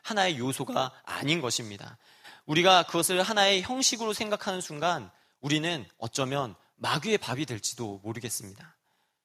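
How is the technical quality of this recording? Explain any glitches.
The recording's technical quality holds up, with no glitches to explain.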